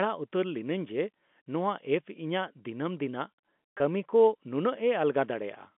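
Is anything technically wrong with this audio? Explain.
Yes. At 3.78 to 3.80 s there is packet loss with pitch repetition. About 20 ms of audio never arrived, which fits a single lost packet. The receiver concealed the gap by looping the last pitch period of the speech it had and tapering it off. Because the gap is so short, the result is a brief held, slightly buzzy sustain rather than a dropout. The speech then resumes through a quick cross-fade, all within the telephone band of the G.711 line.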